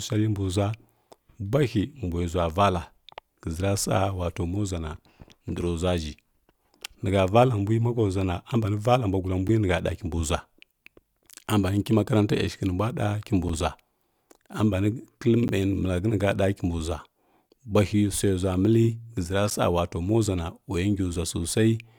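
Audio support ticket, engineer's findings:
Periodic USB or driver dropouts: a background task stalling the USB bus or audio driver every 2.0 s, from 9.48 s to 19.51 s, starting right after "valla mbwa gulla". Each stall drops roughly 10 ms of speech, filled with silence. About seven evenly spaced ticks, heard only over signal.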